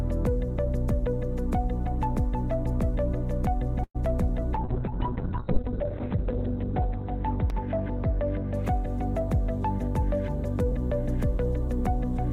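At 3.83 s the audio stalls for about 0.13 s in a call audio freeze. The tail of the last sound is stretched into a short fading buzz, then about 60 ms of silence, before the audio resumes from where it stopped, so nothing is lost but everything after arrives about 112 ms later. The likely cause is delayed packets draining the jitter buffer. On a waveform this shows as a decaying smear into a flat line; a spectrogram shows a blurred, featureless band followed by a blank gap.

From 4.57 s to 10.86 s a call bitrate drop sets in. The encoder falls from 96 kbps to 6 kbps, staying at its lowest for about 1.7 s, and the coded bandwidth shrinks from 20 kHz to 4 kHz. The sound turns muffled, rough and watery, losing its clarity and air. On a spectrogram the energy above 4 kHz is sharply cut away, and the remaining lower bands look blocky and smeared until the bitrate recovers.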